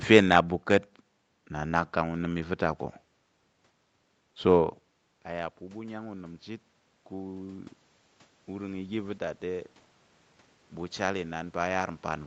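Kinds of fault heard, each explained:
Automatic gain rising: after the input drops about 14 dB, the gain control slowly adds about 5 dB from 5.29 to 7.77 s, swelling voice and background together.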